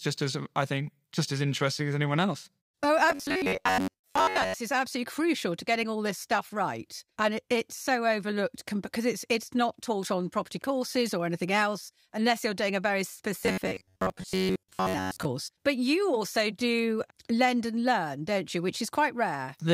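Robotic sound from repeated short buffers affects this speech clip from 3.1 to 4.55 s, just before "is absolutely crucial to", and again from 13.40 to 15.25 s, between "you're doing a very" and "but you also do". Both stretches take on a rigid, metallic buzz at 93.8 Hz. That pitch fits a segment of about 10.7 ms being replayed for most of each span, likely because new audio arrived too seldom and the gaps were filled with repeats.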